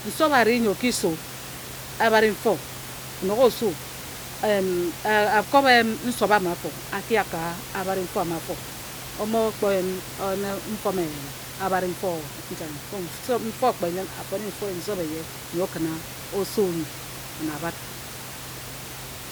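No technical faults can be heard anywhere.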